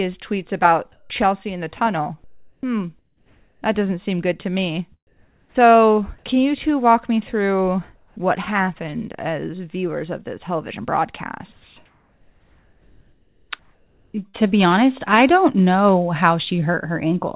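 In the pauses at 0.92–1.1 s, 2.24–2.63 s, 2.99–3.62 s, 5.07–5.55 s, 7.96–8.17 s and 11.52–14.49 s, the real background becomes a flat, featureless hiss, likely comfort noise in place of the background. The receiver synthesises this noise while the sender stays silent. Its level jumps by about +9, −3, −3, −2 and +1 dB in the first five, against a background about 39 dB below the loud parts. On a spectrogram these stretches show smooth, uniform grey with no texture, cut at 4 kHz like the rest of the call.

Near the end of the last pause, at 14.28–14.49 s, a burst of packet loss leaves about 60 ms of audio missing. About 53 ms is filled by the receiver carrying the last sound forward and turning it down. The waveform shows a brief tapering patch, then an abrupt resumption.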